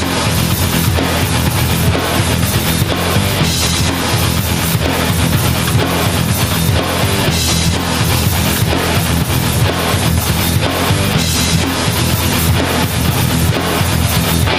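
Gain pumping runs through the whole clip. The gain swings by around 5 dB as loud sounds arrive, which flattens the difference between loud and soft passages. The likely cause is input gain set far too high with a fast limiter clamping down on peaks.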